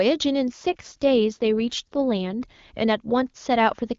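From 0.48 to 2.46 s there is an AMR rate drop. The band stays the same and nothing cuts out. The speech turns rough and buzzy, which fits the AMR-WB codec stepping down from 23.85 to 8.85 kbit/s, then clearing when the rate recovers.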